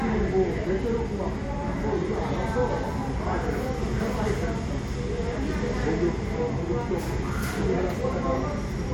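A recording of sounds, and nothing technically wrong turns up anywhere in it.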